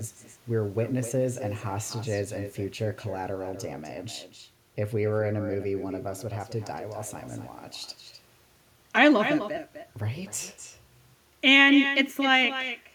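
Every phrase in this speech recording is trailed by a quieter, thinner copy of itself, arriving roughly a third of a second later and sitting about 9 dB below the direct sound, all the way through. That is echo with no canceller: the far end played the call over a loudspeaker, its microphone caught that playback, and nothing stripped it out, so the talker's own audio returned after a full network round trip.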